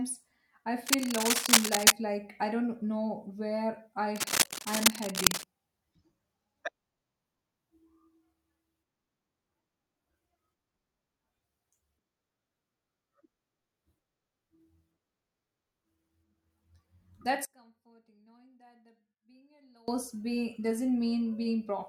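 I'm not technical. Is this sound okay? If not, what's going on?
No. Twice, a rough scratching, rustling noise sits over the speech: from 0.83 to 1.92 s, ending just before "like I don't know", and slightly louder than the speech, then from 4.16 to 5.44 s, right after "I don't know where", about as loud as the speech. This is cable scratch noise, likely a worn cable or plug being moved and briefly losing clean contact.

From 17.45 to 19.88 s the speech almost disappears. That points to one channel inverted: one side of the stereo signal is likely flipped upside down, so when both sides are combined on a single speaker, the shared voice cancels itself out.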